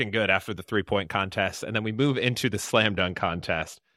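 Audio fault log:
1.93–3.97 s, Bluetooth SBC bit pool drop: right after "then we" the treble dulls and a gritty, grainy noise rises under the speech, persisting to the end. The encoder is giving the top sub-bands few or no bits and quantising the rest coarsely, which fits a bit pool falling from 28 to 14, near 108 kbps. A spectrogram shows the upper band thinning or blanking abruptly at 1.93 s, with speckled noise between harmonics; the waveform envelope barely changes.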